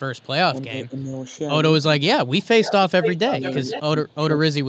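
From 0.15 to 0.28 s a very faint echo leak sits about 40 dB under the speech, a copy delayed 339 ms, likely from a loudspeaker echo canceller letting residue through. On a spectrogram it is a barely visible ghost of earlier harmonics.

Between 0.51 and 0.96 s, speech suppressed in double talk dips by about 15 dB, likely because the canceller ducked both talkers. Gaps and notches totalling roughly 0.2 s show in the waveform envelope.

The same suppression returns from 1.97 to 2.6 s, cutting up to about 25 dB across roughly half a second, so sound drops out in chunks that appear as dark vertical gaps in the spectrogram.

From 2.62 to 3.81 s a much stronger echo leak, only about 10 dB down and delayed 474 ms, smears repeated harmonic patterns across the spectrogram.

From 3.8 to 4.19 s, double-talk suppression cuts up to about 30 dB over roughly 0.3 s, carving deep holes in the waveform. Throughout, the spectrogram shows nothing above 8 kHz.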